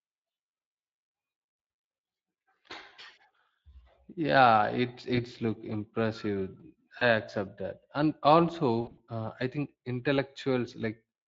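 Throughout, the Speex codec leaves plainly audible damage: the speech sounds hoarse and noisy, with a coarse edge, which fits a setting of roughly 20 kbps, where too few bits remain to code the excitation cleanly.

At 5.15 to 5.20 s and again at 6.99 to 7.04 s, VoIP packet loss concealed by the speech codec shows up as a brief smear. Each fits a single lost 20 ms packet. The decoder repeats its last pitch and filter, and the sound stays distorted just after the gap. At 8.81 to 9.00 s a heavier burst removes about 120 ms of audio across 160 ms, with the longest gap lasting 60 ms. Here the extrapolated sound fades, and the speech recovers weak and smeared.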